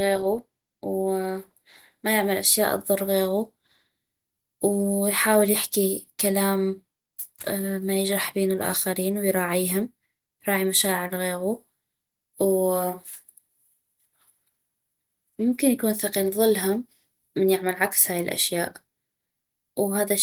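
Nothing stood out on listening to this speech recording.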